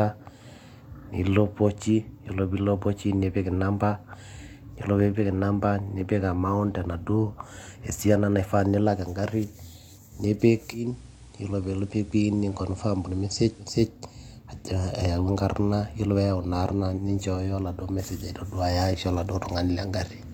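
Digital radio blending to analogue runs from 10.71 to 13.83 s. The receiver lost its digital stream and cross-faded, over about a quarter of a second, to the station's FM broadcast, then faded back. For that stretch the speech drops about 1 dB in level, and a steady hiss sits roughly 30 dB beneath it. Both clear at the return to digital.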